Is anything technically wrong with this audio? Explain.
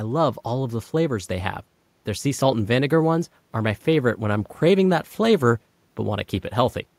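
No, nothing technically wrong turns up anywhere in this speech recording.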